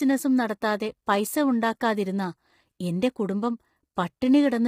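Throughout, likely low-delay AAC compression at a rate fitting 24 kbps damages the speech heavily, leaving it rough and grainy with noise between harmonics.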